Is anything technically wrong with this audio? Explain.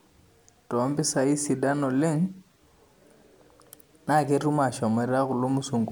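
Yes. Throughout the speech there is generation loss, likely from about four MP3 re-encodes near 130 kbit/s. Each pass re-quantises on a shifted frame grid, leaving a swirly, hollow sound with blurred attacks.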